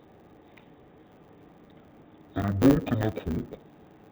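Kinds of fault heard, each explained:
Interleaved audio read as planar, throughout the clip: the stereo samples arrive alternating left and right in 10 ms blocks, but each block is unpacked as if its first half were all left and its second half all right, so both channels play at half speed, squeezed into the same time. With blocks this short, the speech sounds dull and robotic, with a buzz at the 100 Hz block rate and no clear drop of an octave.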